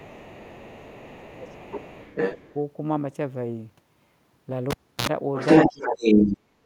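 From the very start to 1.56 s a second, fainter voice sits about 20 dB under the speech. This is the other side's voice leaking through, likely loudspeaker sound that the echo canceller failed to remove from the microphone. Overlapping that stretch, from 0.04 to 0.65 s and again from 1.06 to 1.95 s, the main speech sinks by around 15 dB. That is speech suppressed in double talk: with both sides active, the canceller likely could not tell its own talker from the echo and pulled everything down.

From 1.74 to 2.54 s the leaked voice returns at roughly the same level as the speech, so two talkers compete, again most likely residual echo.

At 4.71 s a pop opens a near-silent gap of about 0.32 s. About 60 ms of 60 Hz mains buzz follows, then a second pop as the sound comes back at 5.07 s. That is a cable pulled and plugged in. The buzz is the half-inserted plug picking up hum before it seats properly.

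From 5.35 to 6.38 s the far-end voice leaks through again, now roughly 10 dB louder than the speech itself, likely uncancelled loudspeaker echo. Between 5.67 and 6.01 s the main speech is crushed by around 25 dB. At 6.61 s, right at the end, it is cut by about 35 dB for a brief moment. Both drops are double-talk suppression, likely from the canceller clamping down while the other side was speaking.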